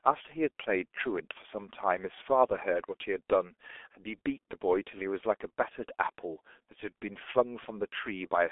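From start to finish the speech runs through the G.723.1 codec, and it's heavily damaged. Nothing comes through above about 3.7 kHz, and the band sits roughly between 300 Hz and 3.5 kHz, so everything sounds boxed-in and muffled. The codec works in 30 ms frames and updates its voice model slowly, which leaves a hoarse, grainy edge and smears the consonants together, which fits a bitrate around 6 kbit/s.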